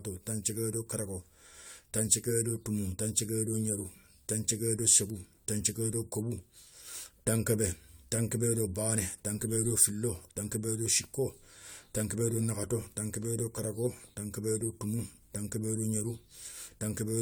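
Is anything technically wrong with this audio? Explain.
Yes. Throughout the speech there is generation loss: the sound is swirly, smeared and hollow, and consonant attacks are blurred. The likely cause is the audio being lossily decoded and re-encoded about three times, consistent with an AAC-LC chain around 96 kbit/s. Each pass quantises on a shifted frame grid, so noise and spectral holes compound. A spectrogram would show speckled, patchy holes in the upper bands with nothing above 20.1 kHz, and the waveform's transients would look softened.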